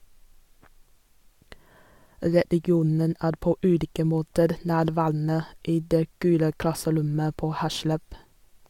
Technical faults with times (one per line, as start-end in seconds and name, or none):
none